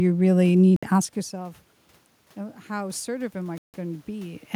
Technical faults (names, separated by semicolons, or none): Bluetooth stall; automatic gain rising